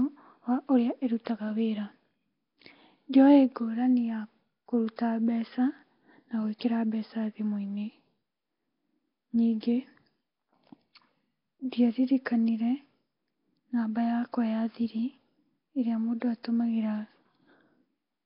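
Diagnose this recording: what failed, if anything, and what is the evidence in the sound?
Codec stage: throughout, the speech has a rough, hissy halo and a smeared, underwater quality, with nothing above 5.3 kHz. This is likely heavy Nellymoser compression, which fits a bitrate near 22 kbps, with starved bands filled with noise. A spectrogram would show a hard 5.3 kHz ceiling and grainy speckle between harmonics.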